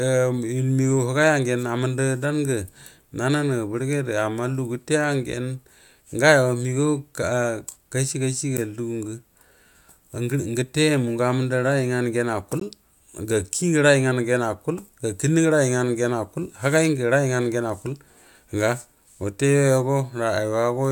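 At 8.57 s and again at 12.60 s the speech drops out for a hard-edged instant of silence, roughly 9 ms and 17 ms long. Each is a gap between stream segments: the 2-second segments' timestamps fail to meet, the player pads the hole with silence, and no audio is lost.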